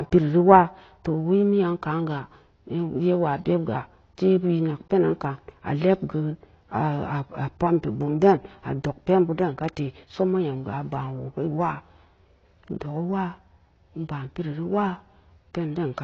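From start to finish the speech sounds dull and smeared, with nothing above about 6.6 kHz, so sibilants lose their edge and take on a fizzy, warbling texture. The likely cause is AAC compression (AAC-LC) at a low bitrate, which fits roughly 24 kbps. Short of bits, the encoder drops the top of the spectrum and quantises the remaining frequency bands coarsely, leaving gaps that smear transients and make sustained sounds swirl.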